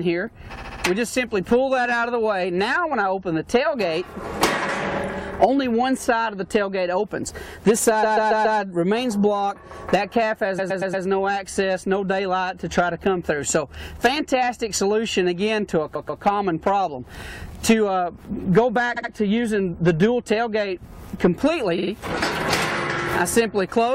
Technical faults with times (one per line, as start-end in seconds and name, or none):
0.55-0.82 repeated frames
8.02-8.58 repeated frames
10.58-11.04 repeated frames
15.94-16.22 repeated frames
18.96-19.10 repeated frames
21.77-21.91 repeated frames